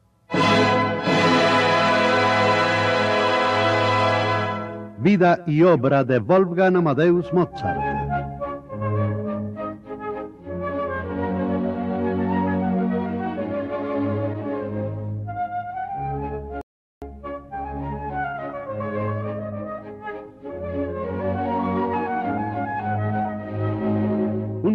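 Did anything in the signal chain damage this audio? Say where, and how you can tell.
Yes, at playback: the streaming player drained its buffer and halted until more data arrived, a rebuffering stall. At 16.61 s the sound drops to silence for about 0.4 s, resuming at 17.02 s exactly where it stopped, so nothing is missing, only time added.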